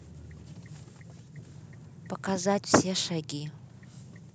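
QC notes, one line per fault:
No faults heard.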